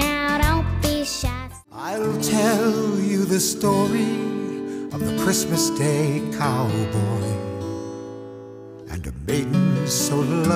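Nothing goes wrong anywhere in this clip, so there's no fault to point to at any moment.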